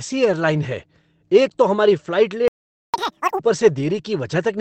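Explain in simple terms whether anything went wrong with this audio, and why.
A playback stall hits at 2.48 s: the speech cuts out mid-flow for just under half a second, until 2.94 s. The likely cause is that the player ran out of incoming audio, or was held up, and had nothing to play until data arrived again.

Catch-up at higher speed follows from 2.94 s to 3.40 s. To win back the lost time, the player races through its backlog at double speed, so the speech sounds hurried and much higher-pitched, nearly an octave up, before returning to normal.

A lost packet rebuilt from error correction appears between 3.73 s and 3.99 s. Several small chunks of audio went missing on the way, and the decoder filled about 140 ms with rough backup copies carried in later chunks, so there's no gap, just a briefly grainier, noisier patch.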